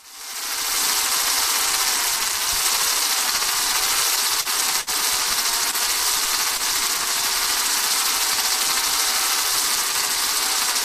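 Repeated stalls (stutter) from 3.85 to 4.90 s: packets kept arriving late, so the jitter buffer emptied four times. The receiver held the last sound across about 115 ms, the longest gap 58 ms. Nothing is lost, but the sound drags and stutters.

Short stalls from a late packet at 5.71 to 5.76 s and 6.57 to 6.62 s: a packet missed its slot each time. The last sound was stretched by 21 and 23 ms, a brief held hitch with a faint buzz or dip before playback resumed.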